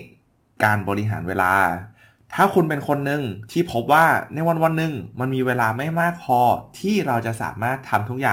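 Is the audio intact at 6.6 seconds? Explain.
No. At 6.6 seconds, as throughout the speech, a gritty, inharmonic fizz rides on the louder and brighter sounds, sitting roughly 25 dB below the signal. This is crude rate conversion: the sample rate was raised without a proper filter, apparently by repeating the nearest existing sample. The pattern fits a conversion from 32 kHz to 44.1 kHz. The irregular repeats leave an error that tracks the signal and adds shifted, inharmonic copies of the voice.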